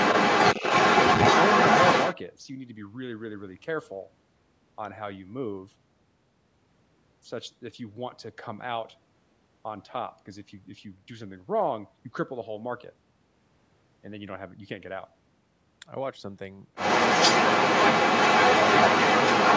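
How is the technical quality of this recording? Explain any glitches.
The recording has two stretches where a second voice intrudes on the speech, at the start and at the end.

Other side's voice leaking through, from 0.0 to 2.15 s and from 16.75 s to the end: a second talker sits clearly on top of the main speech, roughly ten decibels above it. The likely cause is a loudspeaker playing the far end of a call into the microphone, with the echo canceller failing to strip it out. The call microphone processing itself, which keeps nothing above 8 kHz, does its job.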